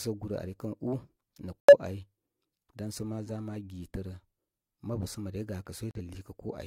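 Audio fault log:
1.61–1.74 s and 5.91–6.01 s, corrupt frame muted: damaged compressed frames were rejected and replaced by silence, so the sound cuts abruptly. The waveform shows flat gaps of about 140 ms and 100 ms, and the spectrogram shows blank vertical bands.
3.25–3.27 s, corrupt frame decoded: a damaged frame was played anyway, so misread data put energy at the wrong frequencies and made a faint, brief stray sound, about -45 dBFS. It shows as a short, stray smear on the spectrogram.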